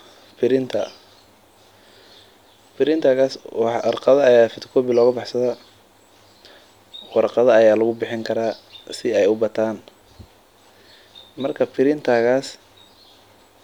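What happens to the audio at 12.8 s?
Nothing goes wrong at 12.8 s; the speech runs on intact through that moment with no dropout, click or distortion.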